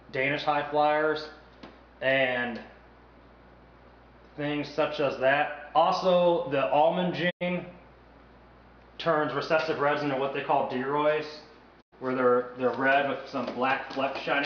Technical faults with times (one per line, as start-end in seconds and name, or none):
7.29-7.43 digital broadcast dropout
11.80-11.94 digital broadcast dropout